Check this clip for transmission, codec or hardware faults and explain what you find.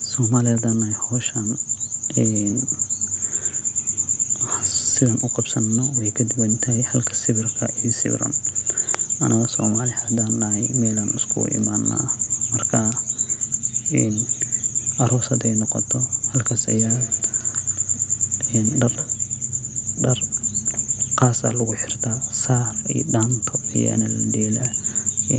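One real fault here, a feedback echo between two devices, from 16.67 to 19.26 s. Two devices on the call hear each other, so the speech loops back about every 150 ms, thinning each pass, peaking about 19 dB under the speech. The top end stopping at 8 kHz is just the call codec's normal bandwidth.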